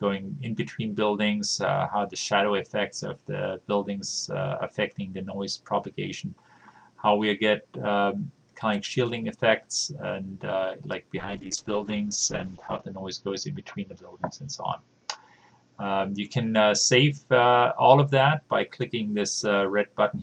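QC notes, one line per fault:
11.2–18.49 s, call bitrate drop: encoder rate falls from 48 to 8 kbps, bottoming out for 1.67 s; coarser coding and an 8 kHz band limit muffle the sound, which recovers by 18.49 s.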